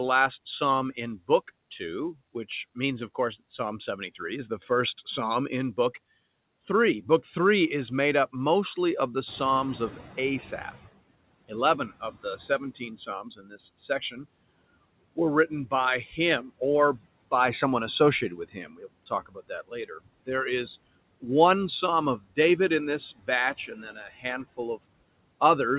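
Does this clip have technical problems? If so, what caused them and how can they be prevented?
Yes. Three kinds of noise suppressor fault are audible in this speech clip.

Noise suppressor artifacts run through the whole clip. The suppressor cuts the bands it treats as steady noise by about 21 dB, frame by frame. The background drops away in the gaps and comes back under the speech. Gentler suppression settings, or a lower noise level at the microphone, would prevent this.

The noise suppressor catching up is heard from 9.26 to 10.89 s. The room noise jumps by about 13 dB at around 9.5 s. The suppressor's noise estimate lags behind this rise. The louder noise leaks through at first with only about 14 dB of reduction. It then sinks over roughly 1.6 s as the estimate adapts. A faster-adapting noise estimate, or keeping sudden noise sources away from the microphone, would prevent this.

Speech is cut by the noise suppressor at 12.97 to 13.59 s, 13.88 to 14.25 s, 18.3 to 18.84 s, 19.06 to 19.5 s, 22.18 to 22.38 s and 23.67 to 24.25 s. 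The suppressor mistakes parts of the speech for noise. It turns them down by about 9 to 15 dB, over about 0.1 to 0.3 s each time. Those sounds come across swallowed or faint. Less aggressive suppression, or a better speech-to-noise ratio at the microphone, would prevent this.

The narrow band with nothing above 4 kHz comes from the G.711 call path, not from these faults.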